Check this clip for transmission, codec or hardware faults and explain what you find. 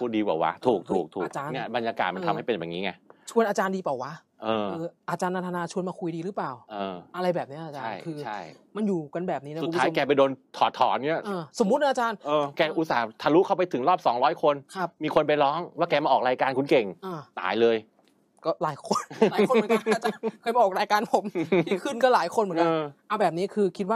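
Nothing to report: no transmission, codec or hardware faults are audible anywhere in the clip.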